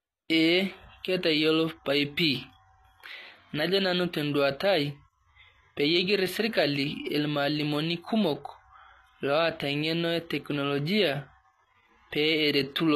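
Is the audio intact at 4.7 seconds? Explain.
No. At 4.7 seconds, as throughout the clip, the sibilants sound gritty and lispy and nothing is heard above 14.9 kHz, with plainly audible coding damage. This is likely HE-AAC compression at a rate near 24 kbps, with the treble rebuilt from copied lower bands.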